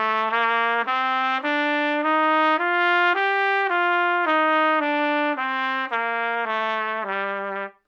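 Everyday sounds, with no technical faults to be heard.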